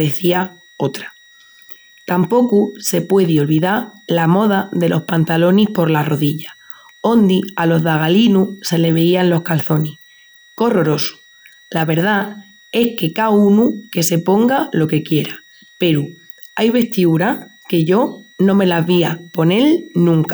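A switching power supply whistle runs throughout: the supply runs in audible burst mode or beats with another supply, leaving a faint high tone wandering between about 1.89 and 1.94 kHz, roughly 35 dB below the speech.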